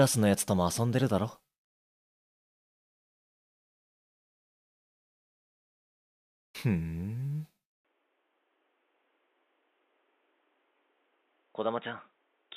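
From 7.85 s to the end, the sound abruptly turns dull and boxy with nothing above 3.8 kHz, drops about 10 dB, and gains a faint new noise floor, with no gap at the switch. The likely cause is an input switched to a poorer device, since a plain filter would not change level and noise too.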